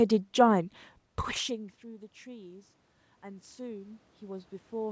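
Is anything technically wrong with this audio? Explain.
Yes. From 1.46 s to the end of the clip, the automatic gain control is rising. After the talker moves away from the microphone at around 1 s, the input level drops by about 24 dB. The gain control then raises its gain step by step to compensate. It cannot tell the voice from the room noise, so both swell together over several seconds. The speech climbs back toward its earlier loudness while the background noise grows louder behind it.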